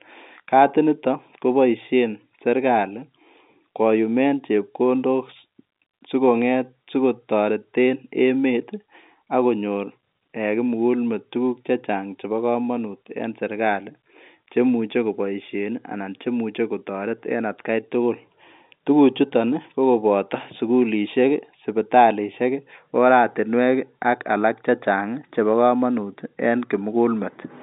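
There are no technical faults to describe at any point in this speech, which comes through an ordinary telephone line band.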